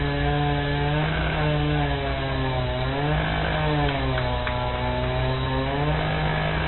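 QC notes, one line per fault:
Throughout: MP3 compression. Nothing is heard above about 4.1 kHz, where the treble stops at a hard ceiling. The damage is plainly audible. The sound has a watery, swirling quality, as weak frequency detail flickers in and out between frames. Sharp attacks are smeared and blunted. A bit-starved encoder drops the top band and zeroes quiet components to save bits. The likely cause is a very low-bitrate MP3 encode, which fits roughly 24 kbps.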